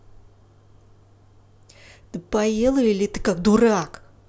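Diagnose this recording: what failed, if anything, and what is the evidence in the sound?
Nothing failed; no audible fault anywhere in the speech.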